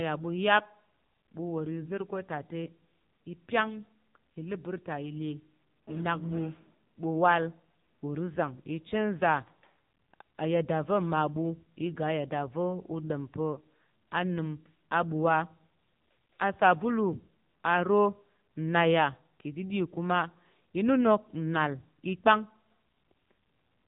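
From start to finish the speech passes through an AMR narrowband mobile codec, the AMR-NB coder used on 2G and 3G calls. Nothing above 3.8 kHz survives. The voice sounds thin and boxed-in. At this low rate the coarse pulse modelling leaves it plainly buzzy and synthetic.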